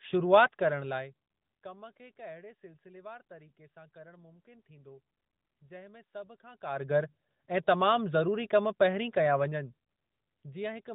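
Nothing stood out on listening to this speech recording.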